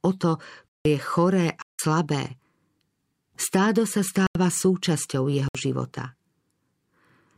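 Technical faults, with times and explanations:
0.68, 1.62, 4.27 and 5.48 s: block of digital silence. Dropouts of 171, 171, 85 and 62 ms occur, the first after "o to" and the third after "stádo sa". Audio drops abruptly to silence and back. The first three lengths fit unfilled 8192- and 4096-sample output buffers.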